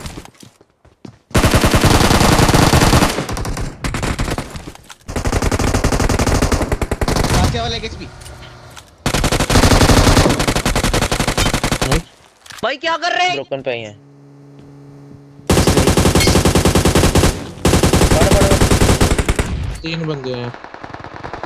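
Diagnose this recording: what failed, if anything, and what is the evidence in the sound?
Nothing failed; no stage shows any audible trouble.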